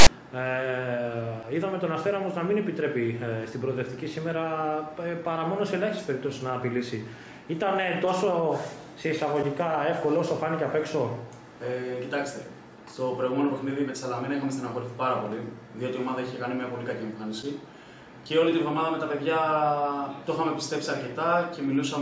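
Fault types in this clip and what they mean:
File tags played as audio: from 0 to 0.07 s, a block of text metadata at the head of the file is decoded as if it were samples, giving a loud, hard-edged rasp offset to one side before the real audio begins.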